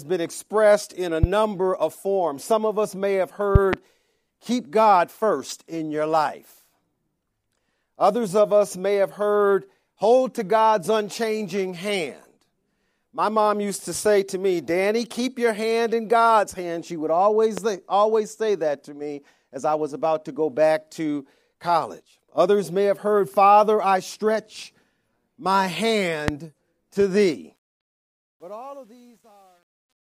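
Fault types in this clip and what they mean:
Loud pop: at 1.23–1.26 s, 3.55–3.76 s (a double pop), 17.58–17.60 s and 26.28–26.31 s, sharp pops stand about 10 to 20 dB above the sound, which continues beneath them, likely from a sudden voltage step such as a switch, static or driver glitch.
Truncation distortion on a fade: from 27.56 s to the end, the fade-out gets grainy because the level stage keeps too few bits without dither, which fits roughly a 10-bit path. From 28.2 s the quiet tail is at its grittiest.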